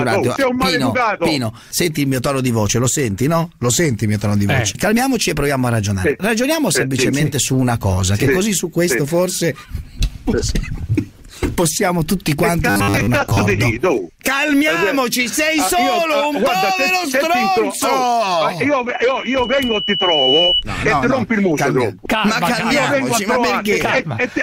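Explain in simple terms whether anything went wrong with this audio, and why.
Two things go wrong. From 12.70 to 13.42 s the sound turns into a rigid, metallic buzz at 100 Hz. This is robotic sound from repeated short buffers. The likely cause is audio arriving late, so 10 ms pieces got repeated, covering about half this stretch.

From 18.93 to 20.64 s there is a loudspeaker feedback squeal. A microphone picked up its own loudspeaker. One tone, at 3 kHz, grew by itself over about a second and a half into a piercing whistle louder than the sound.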